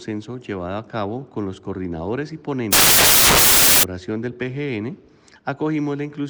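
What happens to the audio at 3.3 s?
At 3.3 s the audio is inside a stretch of samples built from the wrong bytes, running from 2.73 to 3.83 s. The reader assembles each sample's bytes misaligned or swapped, so the rapidly changing low bits dominate, producing loud, harsh broadband noise.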